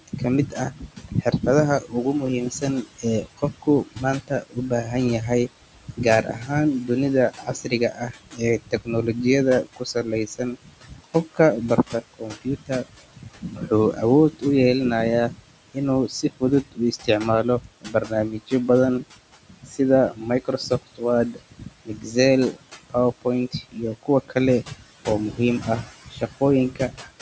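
A noise suppressor is running over the whole of this speech clip, pulling down about 18 dB of what it treats as steady room noise frame by frame, so the background sinks in the pauses and surges back under the talking. The room noise sits about 18 dB below the speech, and the call microphone processing leaves nothing above 8 kHz. The same suppressor also misjudges parts of the speech as noise: speech cut by the noise suppressor appears from 0.01 to 1.95 s, 2.5 to 14.43 s and 15.29 to 27.13 s, with drops of up to about 19 dB. Affected stretches total roughly a second, five seconds and four seconds, leaving soft consonants and word endings swallowed and faint.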